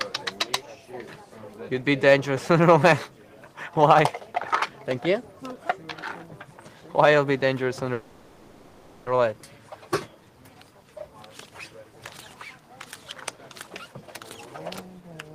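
From 7.93 to 9.08 s there is a call audio freeze, most likely because packets were held up in transit and the receiver's jitter buffer ran empty. With nothing new to play, the receiver stretched the last sound it had into a buzz or hiss that fades over about 1.13 s without dropping to silence. When the audio resumes it carries on exactly where it stopped, so nothing is lost, but the stream now runs 1.13 s later than before.

From 13.32 to 14.08 s a jitter buffer speed-up follows. The buffer was holding more audio than its target, so the receiver trimmed short pieces of one or a few pitch periods, over and over, to reduce the delay. Roughly a fifth of a second is removed this way. The sound runs at about 123% speed with its pitch unchanged, which comes across as noticeably hurried.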